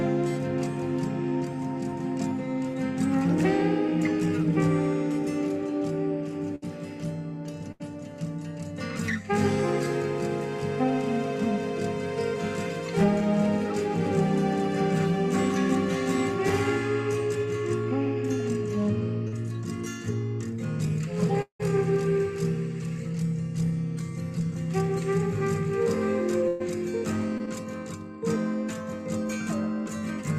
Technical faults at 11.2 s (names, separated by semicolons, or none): none